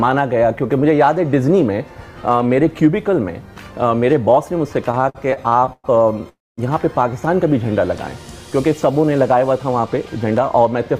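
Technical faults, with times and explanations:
4.91 to 6.27 s, repeated stalls (stutter): the sound keeps catching and dragging, with 13 short holds of up to 109 ms filling about a quarter of this span. Packets arrived late, the jitter buffer kept emptying, and the receiver stretched the last sound each time, so nothing is lost.
6.29 to 6.59 s, call audio freeze: the sound hangs as a fading continuation of what came before, then drops to near silence for about 220 ms before resuming where it stopped. The likely cause is packets held up in transit, which emptied the jitter buffer and added a 285 ms gap.
9.03 to 10.41 s, jitter buffer speed-up: the sound runs hurried, at about 111% speed with pitch unchanged. The buffer held more audio than it aims for, so the receiver trimmed many short pitch-period slices, roughly 150 ms in all, to bring the delay back down.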